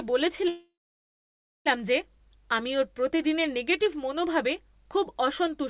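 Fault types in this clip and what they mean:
call audio freeze: from 0.48 to 1.68 s the sound stalls, a short fading continuation then about 0.93 s of silence, likely as delayed packets drained the jitter buffer; it resumes where it stopped, nothing lost, now about 1.2 s late.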